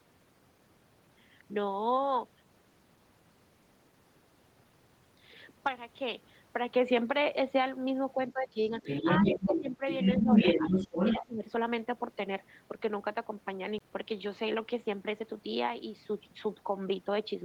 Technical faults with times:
8.15-8.72 speech suppressed in double talk
8.28-8.32 other side's voice leaking through
8.84-11.25 other side's voice leaking through
9.03-9.83 speech suppressed in double talk
10.19-11.44 speech suppressed in double talk
13.78-13.80 CD skip

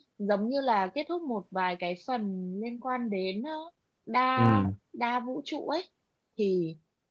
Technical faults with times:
none

